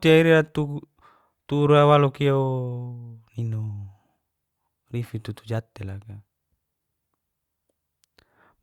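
No technical faults can be heard anywhere in this speech recording. Nothing stands out at any point that would need a time or an explanation.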